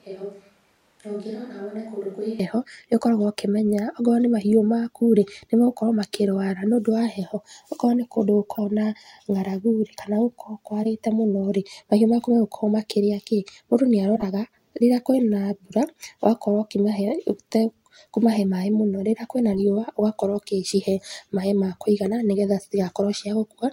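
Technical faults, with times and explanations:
0.00–2.39 s, switch to a distant microphone: the close microphone's feed was likely missing, so the recording falls back to a farther pickup. The speech is already roomy and hollow at the start, thinner in the bass, about 10 dB quieter, with more room noise beneath it, until the closer sound returns abruptly.
8.54–8.59 s, 10.83–10.86 s, 14.15–14.23 s, 19.53–19.60 s, and 22.46–22.49 s just after "ma kũigana", corrupt frame decoded: damaged compressed frames were played as if valid, so misread gains and codes throw energy into wrong frequencies. Each event is a brief chirp or noise burst spanning a few frames, loudest at 14.15 s.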